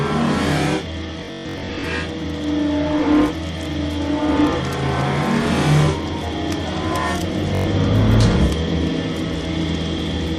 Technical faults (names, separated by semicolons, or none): Bluetooth stutter